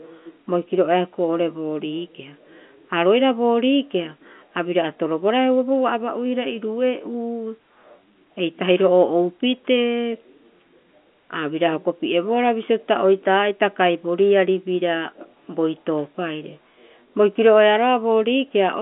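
Nothing here stands out as a fault: the speech sits in the ordinary telephone band of G.711 A-law coding at 64 kbps, roughly 200 Hz to 3.4 kHz with nothing above about 3.7 kHz, and any hiss from the coding is faint at most.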